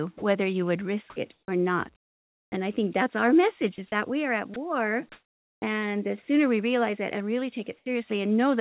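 Sound dropped by the voice detector hits this speech recording three times: at 0.18 to 0.22 s, at 3.76 s between "think that's our message" and "is that we are", and at 4.54 s just after "that we are at". Each time a brief piece of speech, 10 to 40 ms, gives way to steady noise or near silence. The sender's voice-activity detector likely mistook the sound for background and stopped transmitting, so the receiver filled the gap with synthetic noise. Comfort noise in place of the background appears at 1.32 to 2.52 s, just after "you would risk it", at 5.12 to 5.62 s and at 7.78 to 7.86 s. During these pauses the real room tone, sitting about 36 to 40 dB below the loudest speech, is replaced by a smooth, featureless noise. That noise jumps about 7 dB in level at 5.12 s and drops about 11 dB at 7.78 s, likely because transmission pauses when no speech is detected and the receiver synthesises a rough stand-in. 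Onset clipped by the voice detector shows at 1.44 s and at 5.59 s. There, speech resumes abruptly with its first 40 ms and 30 ms missing, likely because the detector was slow to register that sound had started again. The audio is band-limited with nothing above 4 kHz, which fits a G.711 A-law call path at 64 kbps.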